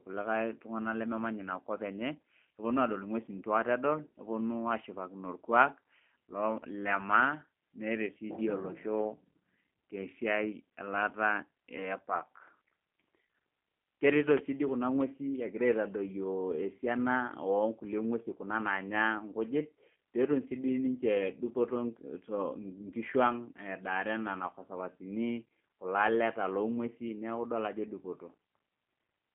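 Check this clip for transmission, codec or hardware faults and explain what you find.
The clip carries a G.729 codec fault from start to finish. Everything above 3.4 kHz is gone and the sound sits in a 200 Hz to 3.4 kHz line band, which fits an 8 kbit/s G.729A coder. The speech is rebuilt from a filter, a pitch predictor and a few pulses, so it turns rough and synthetic. A plain telephone band-limit would leave the speech smooth and natural rather than buzzy.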